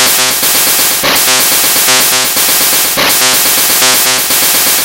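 Everyday sounds, hard clipped from start to finish: the signal is driven about 9 dB past what the stage can pass, so roughly a sixth of the samples are flattened. Loud moments carry a harsh fuzz. The waveform shows squared-off peaks, and the spectrogram shows harmonics smeared far up the spectrum.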